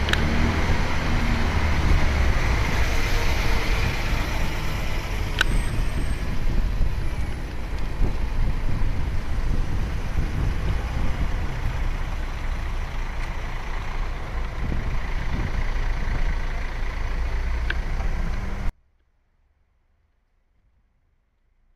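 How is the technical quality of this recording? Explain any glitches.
At 18.69 s the audio drops out to a faint residue through to the end, likely a signal-path break leaving only a faint sound about 40 dB below normal level.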